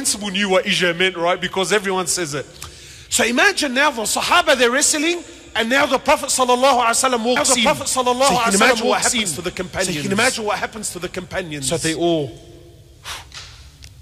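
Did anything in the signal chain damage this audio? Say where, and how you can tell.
Yes. From 7.37 s to 11.97 s there's a doubled audio track: a second full-band copy of the sound trails the original by about a second and a half, at roughly the same level. It has no decay or room colour, and it cuts in and out abruptly at those edges, so it isn't a room reflection. The likely cause is a second, slower capture path feeding the same mix, or an edit that left two copies out of step.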